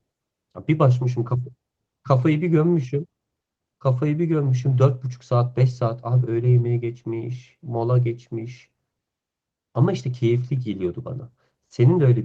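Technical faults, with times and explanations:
The speech comes through Opus voice compression with the full audio band retained, and apart from the light softening that this coding leaves, the signal shows no technical faults.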